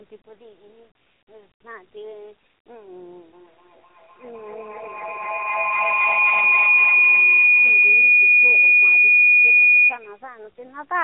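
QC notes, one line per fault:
Throughout: AMR narrowband mobile codec. The speech is boxed-in and thin, with nothing above 3.8 kHz, so sibilants lose their hiss and consonants blur together. A plainly audible buzzy, synthetic edge rides on the voice. The codec rebuilds speech from a vocal-tract model excited by a handful of pulses per short subframe. At this level of damage, few bits go to those pulses, which fits a low mode of around 7.4 kbps.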